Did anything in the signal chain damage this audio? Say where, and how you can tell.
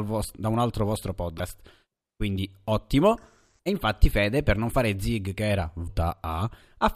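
Yes. The damage sits in the compressed stream, at the codec or storage stage. Two short bursts of damaged data in a compressed stream are audible. The first runs from 1.35 to 1.40 s, right after "da un altro vostro". The second runs from 5.84 to 5.89 s, after "fare zig che era". Each lasts about 54 ms and is heard as a brief chirp, squawk, click or short hole. Corrupted bytes made the decoder misread those frames and lose sync until it found the next valid frame header.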